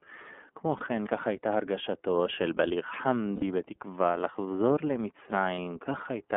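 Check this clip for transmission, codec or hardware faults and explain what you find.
Two problems here: the whole clip has gone through the iLBC codec, and it drops frames three times.

The iLBC codec sound is everywhere. The band runs only from about 250 Hz to 3.5 kHz, and the speech has that slightly rough, synthetic edge. That fits iLBC's 13.33 kbps mode with 30 ms frames, each coded independently, and the damage is plainly audible.

The lost iLBC frames show up at 0.78–0.82 s, 3.36–3.43 s and 5.54–5.58 s. The middle one is about two frames, roughly 60 ms, and the others are about 30 ms each. The decoder repeats the last pitch cycle with some noise mixed in, so each gap sounds like a short, buzzy held vowel. The speech then snaps straight back.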